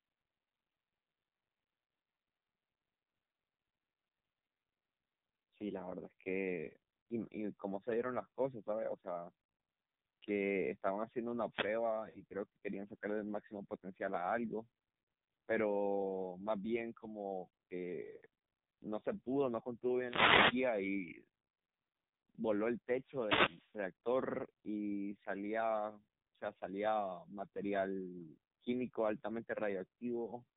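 Throughout, the speech passes through the AMR narrowband mobile codec, heavily squeezed. Nothing above 4 kHz survives, and the voice sounds buzzy and synthetic, which fits a low bitrate near 5.9 kbps. At 1.86 to 1.88 s, lost AMR speech frames make the decoder stretch its last good settings, causing a brief dip or warble that fits one missing frame. At 11.49 to 11.76 s, a wireless microphone noise hit occurs as the radio link fades, heard as a short swish of static. Lost AMR speech frames return at 12.10 to 12.21 s and 18.16 to 18.22 s, where the sound drags and weakens over roughly two frames' worth of concealment before recovering roughly. Further wireless microphone noise hits, at 19.97 to 20.66 s and 22.92 to 23.83 s, bring longer bursts of hiss and static.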